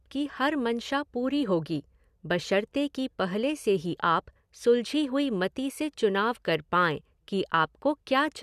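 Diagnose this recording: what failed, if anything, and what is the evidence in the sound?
Nothing failed, and there is no evidence in the sound of a fault at any stage of this speech recording.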